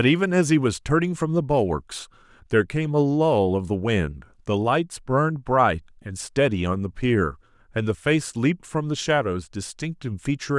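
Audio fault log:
No faults are audible in this speech recording; the signal holds steady, with no breaks, level jumps or other disturbances at any point.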